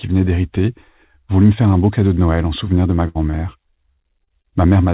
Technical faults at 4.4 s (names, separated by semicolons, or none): repeated packet loss (robotic sound)